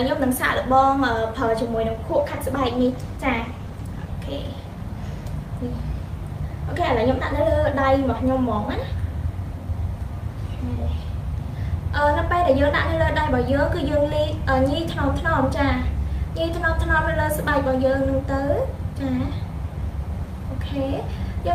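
A call bitrate drop affects the audio from 2.13 to 4.17 s: the sound turns coarse and muffled, with high frequencies cut. This fits the encoder falling from about 48 kbps to roughly 18 kbps after the bandwidth estimate fell, before recovering.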